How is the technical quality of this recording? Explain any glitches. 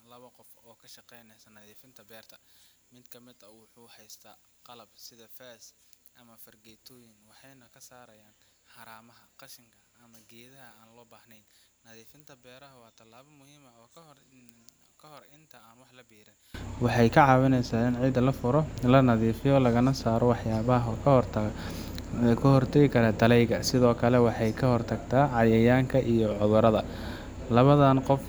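The technical quality is poor for the first 16.5 seconds, because one fault dominates that stretch. From the start to 16.54 s the speech drops by about 30 dB and turns faint, the likely result of one channel inverted: with one stereo side's polarity reversed, the shared centre content cancels when summed to mono. On a waveform that span looks nearly flat. A spectrogram shows the whole spectrum almost gone, with only faint traces remaining until full level returns.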